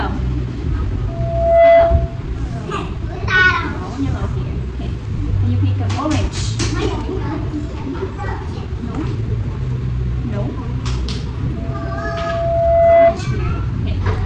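A microphone picking up its own loudspeaker causes loudspeaker feedback squeal: a 672 Hz tone swells over the sound, from 1.08 to 2.22 s and again from 11.56 to 13.18 s, peaking around 10 dB louder.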